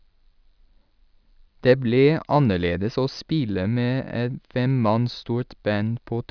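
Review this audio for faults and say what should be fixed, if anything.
No faults heard in this speech recording; nothing needs fixing.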